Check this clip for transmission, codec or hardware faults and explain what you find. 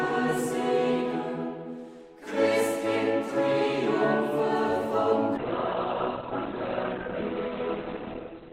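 One fault: the adaptive stream drops to a lower bitrate from 5.37 s to the end at 8.52 s. With the connection slowing, the player switched to a leaner encode, which fits a move from about 64 to 12 kbit/s. Quality changes abruptly with no gap: nothing is left above 4.4 kHz, and codec artefacts rise.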